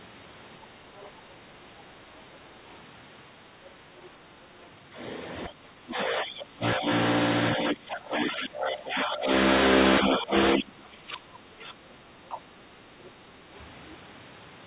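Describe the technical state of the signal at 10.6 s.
At 10.6 s the speech sits inside a stretch of speech suppressed in double talk, running from 10.0 to 11.75 s. The level falls in pieces, by roughly 25 dB at its deepest, likely because an echo canceller could not separate this talker from the loudspeaker echo of the far side and turned the talker down too. The band stops at 4 kHz throughout, which fits a narrowband G.711 call.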